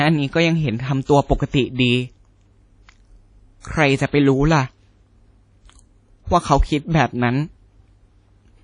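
WMA compression runs throughout this speech clip, likely from a low-bitrate transform codec near 32 kbps: ringing, washy smearing, breathing hiss, and nothing above 10.1 kHz.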